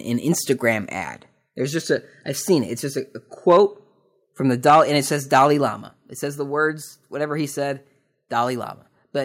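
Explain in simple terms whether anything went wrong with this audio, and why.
The speech has two faults. Microphone overload crackles harshly at 3.5 s after "just a a", at 4.67 to 4.81 s, and at 5.35 s after "and it says", likely from the input being set too loud. A microphone volume step-down follows at 4.7 s, between "from the" and "and it says", and again at 5.7 s. Everything suddenly gets quieter, likely from the call software turning the microphone down.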